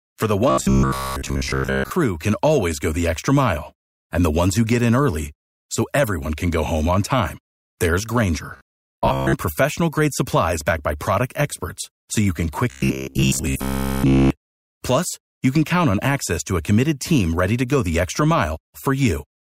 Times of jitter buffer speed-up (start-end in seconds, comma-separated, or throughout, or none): none